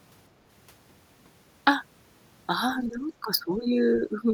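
From 2.77 to 3.78 s and again from 3.97 to 4.31 s, the speech drops in level by up to roughly 15 dB in patches. This is likely speech suppressed in double talk, with the echo canceller turning down the near talker while the far side spoke.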